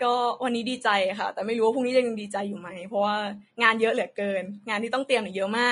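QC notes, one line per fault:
Throughout: Vorbis compression, plainly audible. The speech sounds hissy and grainy, with a dulled top end and blurred attacks. The likely cause is low-rate Vorbis coding that swaps fine treble detail for noise of similar energy, which fits a bitrate near 32 kbps.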